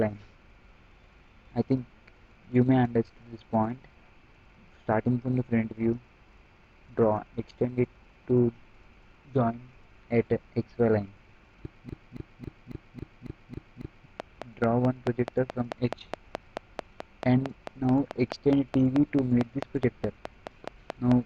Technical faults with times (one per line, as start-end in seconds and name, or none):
11.89-14.06 broken-record loop
14.20-21.12 train of clicks